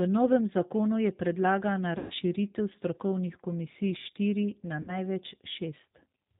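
G.729 codec damage runs through the whole clip: the speech is rebuilt from a vocal tract filter, a pitch predictor and a few pulses per frame at 8 kbit/s, so nothing above 4 kHz survives and the voice sounds plainly rough, thin and synthetic.

VoIP packet loss concealed by the speech codec occurs from 1.98 to 2.14 s, just after "novem zakonu je predlagana", and again from 4.82 to 4.96 s. About 120 ms and then 60 ms of audio went missing. Each time the decoder stretched its last pitch and filter into a fading buzzy tone or coloured noise, and the speech stays weak briefly afterwards.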